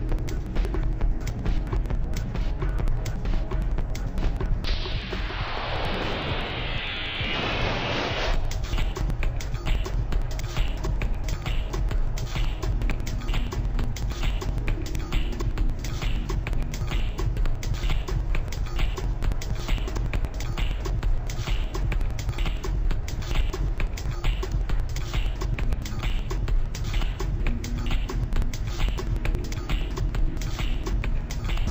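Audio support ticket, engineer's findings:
Interleaved audio read as planar, throughout. Sound an octave low, doubled, choppy at about 10.8 Hz. Likely deinterleave step: each 4096-sample block (about 93 ms) split into halves read as left and right, both halves playing at half speed, so pace holds.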